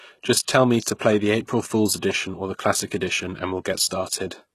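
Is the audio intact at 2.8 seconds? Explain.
No. At 2.8 seconds, as throughout, the speech carries plainly audible damage, likely from HE-AAC compression at a low bitrate around 16 kbps. Treble is rebuilt from copied lower bands, so s sounds turn gritty and metallic; a spectrogram shows smeared, repeated upper bands ending sharply at 12.3 kHz.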